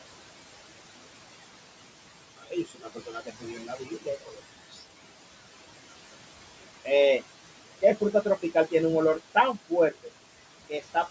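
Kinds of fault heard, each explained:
Noise suppressor artifacts: frame-by-frame gain reduction pulls the steady room noise down by about 18 dB, leaving it pumping between phrases.
Speech cut by the noise suppressor: quiet speech mistaken for noise is attenuated with it, dipping up to about 16 dB across 2.37–4.41 s, around 4.8 s and 9.9–10.1 s.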